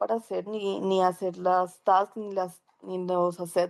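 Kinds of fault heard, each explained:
No technical faults can be heard in the speech. There is nothing to list here.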